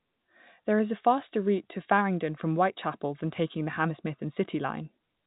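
No technical faults can be heard anywhere in the speech. The G.711 telephone coding is working as it should, with nothing above about 3.8 kHz and at most a faint quantisation hiss that follows the level of the speech.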